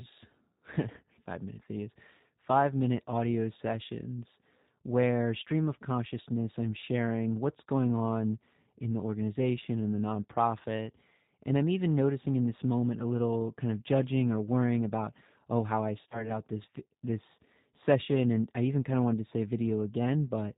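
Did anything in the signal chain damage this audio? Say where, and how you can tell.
Yes, at the codec: it's G.729 at 8 kbit/s, so nothing above 4 kHz survives and the speech comes out plainly rough and synthetic.

Network stage too: VoIP packet loss concealed by the speech codec at 2.37 s, after "five minute videos", and at 16.09 to 16.31 s, after "about oh how I". The decoder stretched its last pitch and filter into a buzzy tone or coloured noise that fades, and the voice stays weak or distorted until it recovers.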